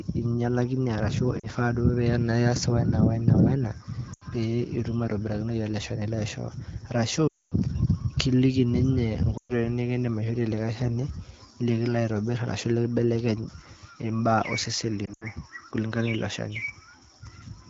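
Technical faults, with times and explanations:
1.39–1.46 s, 4.13–4.25 s, 7.28–7.54 s, 9.37–9.52 s and 15.06–15.25 s: lost AMR speech frames. Frames failed their checks, so the AMR-WB decoder filled the gaps from its last good pitch and vocal tract settings, with fading gain. The 40 ms gap dips toward near silence. The 80 and 120 ms gaps drop to near silence. At 7.28 s, 240 ms drops to near silence within two frames. At 15.06 s, short losses scatter over 160 ms.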